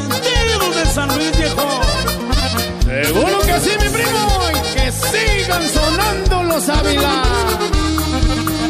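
No technical faults can be heard anywhere in this audio.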